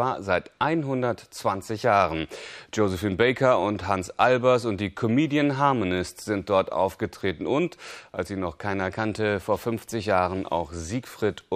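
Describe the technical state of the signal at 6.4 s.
At 6.4 s the signal is intact, with no dropout, distortion or other fault to be heard.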